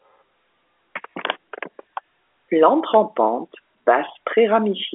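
The speech sits in the 250 Hz to 3.5 kHz band of G.711 A-law telephone coding at 64 kbps, with nothing above 3.7 kHz, and no fault can be heard anywhere in the signal.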